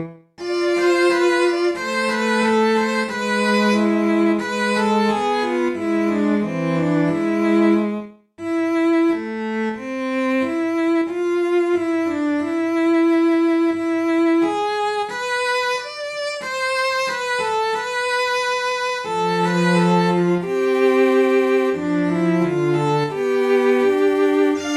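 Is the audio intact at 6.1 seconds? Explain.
Yes, the audio at 6.1 seconds is intact, with no dropout, click, distortion or other fault at that moment.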